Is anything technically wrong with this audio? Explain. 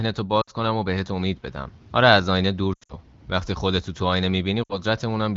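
Yes. This speech has lost AMR speech frames in three places: 0.41 to 0.50 s, 2.74 to 2.93 s and 4.63 to 4.79 s. Frames that failed their checksum were replaced by the wideband decoder's concealment, which repeats the last good pitch and vocal tract settings at falling gain. The short gaps, about 60 ms each, sound like a brief smeared dip. The middle event has losses scattered over about 160 ms, with a longest run near 80 ms, so the sound drops to near silence before returning weak or rough.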